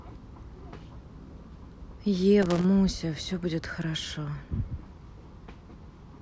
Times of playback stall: none

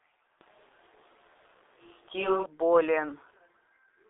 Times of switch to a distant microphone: 0.41-2.46

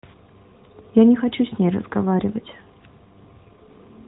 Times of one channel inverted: none

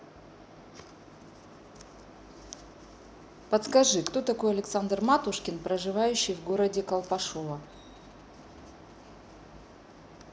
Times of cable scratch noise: none

